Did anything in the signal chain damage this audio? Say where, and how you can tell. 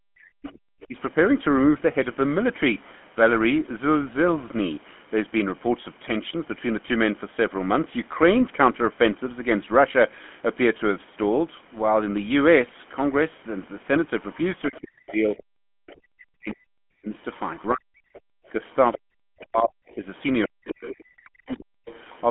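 Yes, the damage starts at the codec stage. The whole clip has the buzzy, gravelly roughness of the GSM full-rate codec, and it's plainly audible. Nothing comes through above 3.8 kHz, and the bandwidth sits in the narrowband line range, which fits 13 kbps full-rate GSM. The rasp comes from the codec rebuilding the voice from a vocal-tract model driven by a sparse, regularly spaced pulse excitation. That throws away the fine detail that makes speech sound smooth.

In the call processing stage, there's speech suppressed in double talk in two places. From the very start to 0.96 s, about half a second of the talker gets pushed down hard, at the worst around 40 dB. Then from 14.68 s to 21.89 s it happens again over roughly four seconds in total, with the talker dipping. The likely cause is the echo canceller hearing both sides at once, failing to separate the talker from the loudspeaker echo, and ducking everything.

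The same stage lets the other side's voice leak through. There's a faint second voice from 0.48 s to 0.86 s, around 25 dB under the talker. A longer stretch runs from 17.33 s to 22.2 s, about 20 dB down. It sits secondary behind the main speech. That's likely loudspeaker playback getting back into the microphone, with the echo canceller not fully subtracting it. Note how it overlaps the second suppression stretch, which is consistent with both sides talking at once.

There's also background gated by the echo canceller, a brief hole in the room sound from 18.35 s to 18.46 s. The ambience drops by about 40 dB for roughly a tenth of a second, then comes straight back. The canceller clamped the microphone while the loudspeaker was active and released it a moment later. It sits right inside the double-talk and leakage stretch, which fits that picture.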